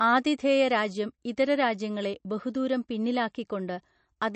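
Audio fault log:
Throughout, MP3 compression: the speech has nothing above 8.3 kHz and carries a plainly audible watery, swirly texture, with s sounds turning metallic and consonant onsets smeared. The likely cause is an encoder starved of bits, which fits a low bitrate near 38 kbps: it cuts the treble at a fixed point and drops weak frequency lines that flicker between frames. That flicker sets it apart from a simple low-pass filter, which would only dull the sound.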